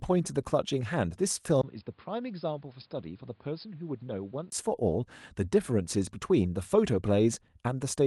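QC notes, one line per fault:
1.61–4.52 s, input switched to a poorer device: a brief gap of about 20 ms at 1.61 s, then the speech turns dull and boxy, with nothing above 5.1 kHz. The level drops by roughly 10 dB, and a new background noise sits roughly 35 dB below the speech. This is likely a change to another microphone or a headset's call profile, which has a narrower band, its own tone and its own noise floor. Full bandwidth returns at 4.52 s.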